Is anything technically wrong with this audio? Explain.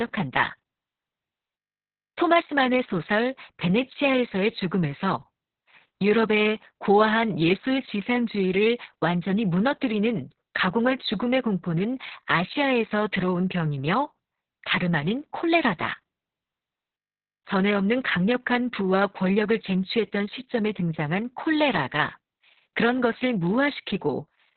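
Yes. Throughout the speech the sound is muffled, hoarse and slightly robotic, with nothing above 4.2 kHz. This is heavy Opus voice compression in its SILK mode. SILK models speech with linear prediction, and at a very low rate it limits the signal to narrowband and codes the excitation coarsely. That loses the upper band and roughens the voice, consistent with a rate of about 6 kbps and long 60 ms frames.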